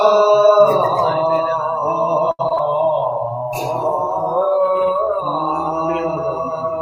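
Repeated packet loss (robotic sound) occurs from 2.31 to 2.61 s. Four short holes, the longest about 76 ms, are patched by stretching the preceding sound, so roughly two-fifths of that stretch is concealment and it turns choppy. A call bitrate drop follows from 2.99 to 5.23 s. The audio becomes coarse, watery and dulled at the top, which fits the encoder being pushed from about 96 kbps down to 22 kbps and trimming high frequencies until the bitrate recovers.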